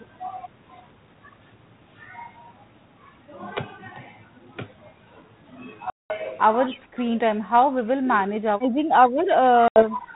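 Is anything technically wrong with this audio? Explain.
Yes. The speech has three kinds of fault: packet loss, an echo leak, and speech suppressed in double talk.

Packet loss on an ADPCM call occurs twice. From 5.90 to 6.12 s, about 200 ms of sound drops to hard-edged silence, which suggests several packets lost in a row. A shorter gap of about 80 ms follows from 9.68 to 9.86 s. ADPCM sends only differences from a running prediction. A gap leaves the decoder's predictor and step size out of step with the sender's. The speech comes back slightly distorted, then settles within tens of milliseconds.

An echo leak appears from 6.67 to 6.77 s. A faint, delayed copy of the speech sits about 20 dB below it, lagging by 254 ms. It is brief and scrappy. The likely cause is a loudspeaker at the far end. That end's echo canceller missed part of what its microphone picked up, and the leftover was sent back down the line.

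Speech suppressed in double talk occurs in four stretches: 6.69 to 7.01 s, 7.46 to 8.32 s, 8.71 to 9.16 s, and 9.33 s to the end. The speech dips by roughly 15, 10, 15 and 20 dB. This likely happens because both sides talk at once. The echo canceller cannot tell this talker from the loudspeaker echo, so it turns both down.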